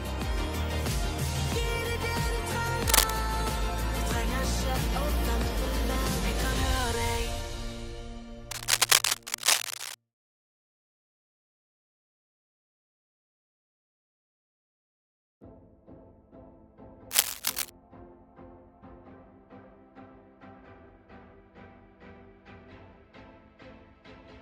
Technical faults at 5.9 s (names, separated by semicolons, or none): none